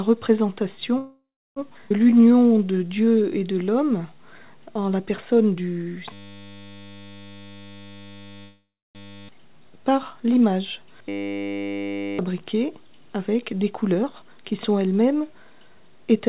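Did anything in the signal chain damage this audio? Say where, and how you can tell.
Yes, this audio has several network-side and buffer-side faults.

Call audio freeze, at the network and jitter buffer: packets were likely held up and the buffer ran dry. From 0.98 to 1.59 s and again from 8.41 to 8.98 s, the last sound is carried on as a fading buzz or hiss, then about 0.3 s of silence. Playback resumes where it stopped.

Skip ahead, also at the jitter buffer: audio was dropped while later packets were already queued. At 1.89 s, playback jumps forward, losing roughly a third of a second. The two sides are butted together with almost no gap.

Jitter buffer slow-down: the buffer was running low, so the receiver repeated single pitch periods to rebuild a reserve. From 2.10 to 4.15 s the sound runs at 86% speed at the same pitch. This adds 285 ms and stretches sounds out.

System hang loop, at the driver or buffer level: the host froze while the hardware kept cycling a 10 ms ring buffer. 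From 6.13 to 9.29 s and from 11.09 to 12.19 s, that fragment repeats as a steady 100 Hz buzz. Roughly 3 s and 1 s of audio are lost.

Jitter buffer speed-up: after a backlog built up, the receiver cut short pitch-period pieces to reduce delay. From 7.32 to 8.37 s the sound runs at 136% speed, losing roughly 0.4 s. From 13.1 to 14.3 s it runs at 111%, losing roughly 0.15 s. The pitch stays the same, so both stretches sound hurried.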